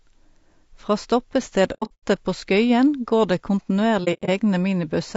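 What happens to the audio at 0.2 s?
At 0.2 s the speech sounds rough and grainy, as it does throughout. This is likely low-delay AAC compression: coarse quantization puts noise between the harmonics, fitting roughly 32 kbps.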